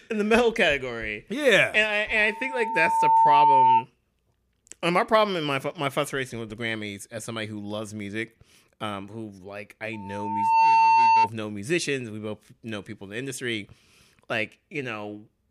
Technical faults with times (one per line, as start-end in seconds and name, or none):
2.08-3.85 loudspeaker feedback squeal
9.93-11.30 loudspeaker feedback squeal